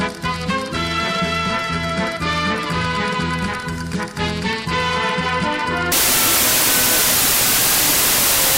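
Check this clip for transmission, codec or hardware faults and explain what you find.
One fault is present: a wrong sample width from 5.92 s to the end. Sixteen-bit data read as packed 24-bit splices mismatched bytes into each value, so loud broadband noise buries the sound, which runs 1.5 times fast and high. The spectrogram fills with noise, and the waveform jumps in level.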